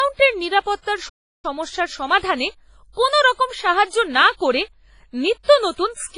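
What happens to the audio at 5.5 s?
Right before that point, from 5.43 to 5.48 s, there's pre-echo: a short hiss smeared about 49 ms ahead of a sharp attack, because block-wide quantisation noise leaks into the quiet moment beforehand. Underneath it all the speech has a washy, ringing quality, most likely heavy WMA compression at something like 24 kbps.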